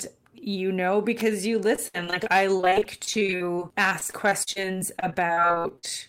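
A speech clip with two faults. At 1.2 s, just after "you know", a sharp snap sits on top of the speech. It is an electrical switching spike, likely from a nearby switch, motor or static discharge arcing into the audio line. On a spectrogram it shows as a thin vertical broadband streak, and on the waveform as a brief spike. From 1.75 to 5.85 s there is repeated packet loss, heard as choppy speech with pieces missing. Across 45 gaps, the longest 64 ms, missing audio was patched by extending the preceding sound, which covers about 22% of that stretch. A spectrogram would show recurring smeared, frozen-looking blocks and breaks, and the waveform would show a choppy, repeating envelope.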